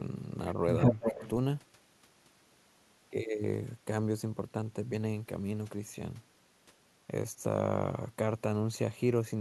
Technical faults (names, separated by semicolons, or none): echo leak; speech suppressed in double talk